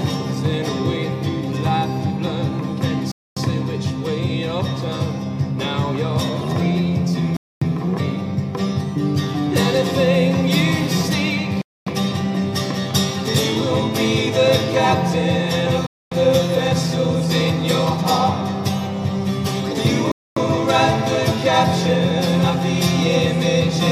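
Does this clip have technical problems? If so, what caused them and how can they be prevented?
Yes, there's a gap between chunks, five times: holes of 250 ms starting at 3.12, 7.37, 11.62, 15.87 and 20.12 s. Each one after the first falls after exactly 4 s of sound, so the audio was clearly cut into 4-second pieces and something inserted silence at each join, probably codec padding or a player starting each piece late. Nothing is lost, it's just interrupted. To prevent it, buffer ahead and play chunks back-to-back with padding trimmed.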